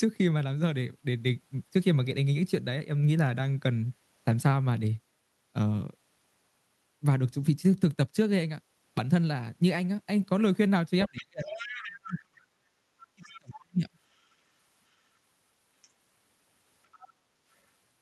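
From 11.06 to 12.66 s, speech suppressed in double talk: both ends were likely talking at once, and the echo canceller, unable to tell the near talker from the loudspeaker echo, pulled the microphone down along with the echo. The speech dips by as much as about 40 dB across roughly a second and a half. Inside that stretch, from 11.18 to 12.14 s, the other side's voice is leaking through: the canceller likely failed to remove all of the far-end audio picked up from the loudspeaker, so a second voice sits about 15 dB under the talker.

The same pairing returns from 13.15 to 13.88 s. The talker again sinks by up to about 40 dB over roughly 0.7 s, and from 13.23 to 13.53 s the far-end voice bleeds in more faintly, about 25 dB down.

Shorter scraps of leaked far-end voice follow at 15.82 to 15.89 s, about 35 dB below the speech, and at 16.92 to 17.08 s, about 30 dB below. Each is a brief fragment rather than a sustained second voice.

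From 17.12 to 17.46 s the background is gated by the echo canceller. With the loudspeaker active, the canceller clamped the microphone, so the room sound drops by about 7 dB and then comes back once the canceller lets go.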